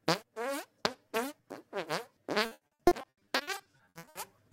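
From about 2.45 s to 4.17 s there's a stretch of repeated packet loss, the robotic-sound kind. Packets kept going missing or arriving late, 21 gaps in all, and each hole got patched by stretching out the last bit of audio before it. That's about 780 ms of filled-in sound, roughly 45% of the stretch, with the longest gap at 80 ms. So you hear the sound go choppy, with chunks missing and short smeared repeats in their place.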